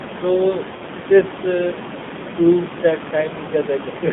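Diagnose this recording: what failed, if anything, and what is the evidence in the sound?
The codec stage failed. The whole clip carries the sound of the AMR narrowband mobile codec. The speech is confined to roughly 150 Hz to 3.6 kHz, so sibilants are dull and the low end is thin. The voice sounds buzzy and synthetic, and the damage is plainly audible. That fits a low AMR-NB rate, around 7.4 kbps. The codec rebuilds speech from a vocal tract model driven by sparse pulses, and at this rate too few pulses survive to sound natural. Room noise sits about 13 dB below the speech.

The network stage also shows a fault: lost AMR speech frames. From 0.76 to 0.82 s the sound stretches and dips for about 40 ms, just before "this uh proves that". That length fits two lost 20 ms frames. The decoder filled the gap by repeating the last good pitch and vocal tract settings at falling gain. The speech then returns briefly weak and rough.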